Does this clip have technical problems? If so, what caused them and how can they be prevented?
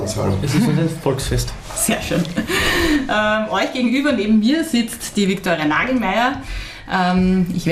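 Yes. Throughout, the audio sounds dull and carries a gurgling, granular distortion, with upper frequencies fading in and out; this is plainly audible MP2 compression, likely from encoding at a low bitrate, around 80 kbps by the sound of it. Layer II divides the spectrum into 32 sub-bands and, when bits run short, drops the top bands and quantises the rest coarsely. A spectrogram would show the high range flickering in ragged blocks. Encode at a higher bitrate or use a more efficient codec.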